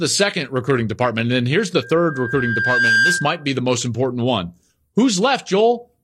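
Loudspeaker feedback squeal runs from 1.81 s to 3.51 s, starting just after "then here's the" and ending before "the most important one". A microphone is hearing the loudspeaker it drives, and at 1.6 kHz the round-trip gain exceeds one, so that frequency feeds on itself. Over about a second it swells into a steady, piercing tone that rises a little above the speech, until it stops.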